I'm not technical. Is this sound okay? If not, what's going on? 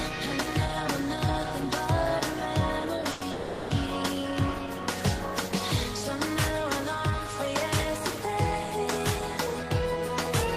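No. At 3.11 to 3.23 s and again at 3.31 to 3.72 s there is a call audio freeze: the last bit of sound is stretched into a short fading buzz, likely because network packets arrived late, then the audio resumes where it stopped. Nothing is lost.

From 9.63 to 10.32 s a jitter buffer speed-up shortens the sound to catch up on that delay. Tiny slices are trimmed out, about a twentieth of a second in total, so it runs about 6% faster at unchanged pitch.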